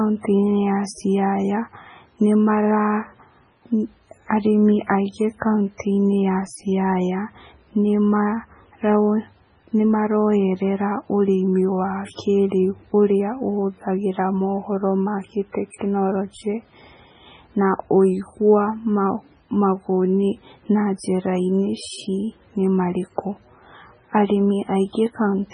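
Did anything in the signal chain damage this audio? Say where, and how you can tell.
Yes. MP3 compression damage runs through the whole speech clip, and the codec stage is the likely cause. Nothing is left above 10.6 kHz, a hard treble ceiling, and the sound is heavily watery and swirly, with sibilants turning metallic. Weak spectral lines drop in and out frame by frame when an encoder is starved of bits, and damage this heavy points to a very low bitrate, something like 16 kbps.

Pre-echo appears at 5.78 to 5.80 s, right after "arĩmĩ aingĩ", and again at 15.71 to 15.74 s, after "ũrĩa ũhũthagĩra mohoro na". Each sharp onset is preceded by a brief hiss of about 22 ms and 31 ms. The transform block spreads its quantisation noise evenly, so noise meant for the loud attack leaks into the quiet moment before it, softening the attack. This is also a codec-stage fault.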